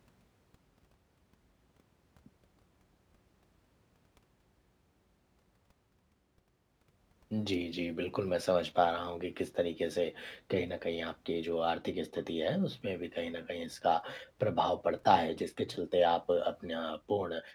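No technical faults can be heard anywhere in the recording.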